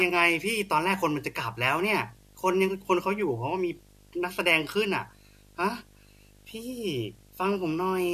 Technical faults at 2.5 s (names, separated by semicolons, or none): video or display buzz